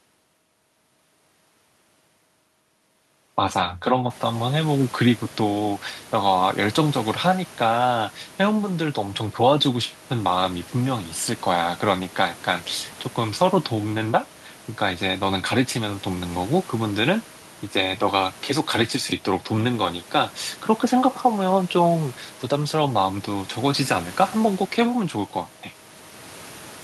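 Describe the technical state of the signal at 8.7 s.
At 8.7 s the signal is intact, with the room's background noise sitting about 23 dB below the speech and no fault in the audio path.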